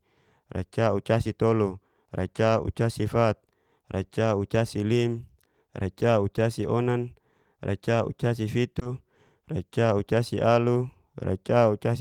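At 8.79 to 8.83 s and again from 8.83 to 8.87 s, back-to-back short concealed packet loss: roughly 20 ms of audio went missing each time and the receiver extrapolated the preceding sound to fill it. It comes across as a brief smeared wobble rather than the hard silence of a plain dropout.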